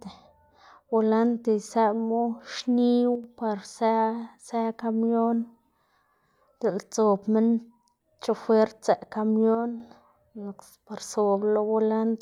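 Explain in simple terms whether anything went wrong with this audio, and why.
The speech briefly dips in loudness twice: from 3.15 to 3.24 s, between "bolante isëꞌmu xniwu" and "par së së kamion", and again from 9.55 to 9.80 s. The likely cause is one channel drops out: one side of the stereo signal vanishes, so the combined sound suddenly loses part of its level.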